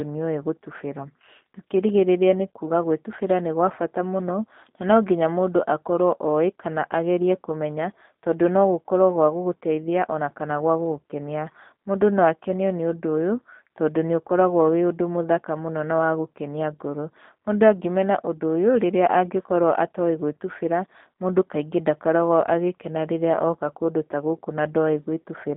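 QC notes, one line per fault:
Throughout, G.729 codec: the speech is confined to a narrow telephone band of roughly 200 Hz to 3.7 kHz, so it sounds thin and boxed-in. The codec resynthesises each short frame from a vocal-tract filter, a pitch predictor and a few sparse pulses rather than the original waveform, which leaves a plainly audible rough, slightly buzzy and synthetic edge on the voice, consistent with an 8 kbit/s coding scheme.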